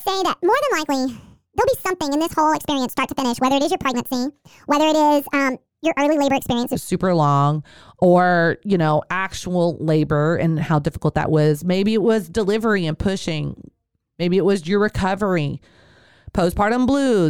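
A section at the wrong speed runs from 0.0 to 6.75 s, ending just before "super long or you". That opening stretch plays 1.6 times faster than it was spoken, so speed and pitch rise together: the speech sounds hurried and chipmunk-like, sitting roughly seven semitones too high. The cause is likely playback or editing against the wrong clock for this section, after which normal speed and pitch return abruptly.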